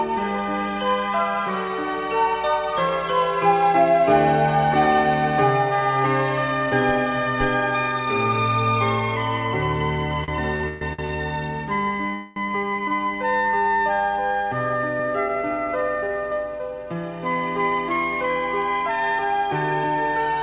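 From 10.24 to 11.17 s the audio drags through repeated stalls (stutter). There are five short gaps, the longest 132 ms, about 291 ms in all. Packets arrived too slowly, so the jitter buffer kept emptying. The receiver stretched the last sound to fill a third of that span.

At 12.14 s a call audio freeze holds for 217 ms, ending at 12.38 s. The sound hangs as a continued buzz, then resumes where it stopped. Nothing is lost. Packets were likely held up in transit, emptying the buffer. Both stalls sit within band-limited call audio that has nothing above 4 kHz.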